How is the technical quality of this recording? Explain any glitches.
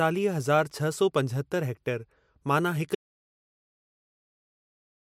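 The recording has one clear fault: an audio dropout to silence. At 2.95 s the speech cuts off mid-flow and the rest of the clip is silence with no room tone. The likely cause is a lost input, such as a disconnected device or failed link, while recording continued writing silence.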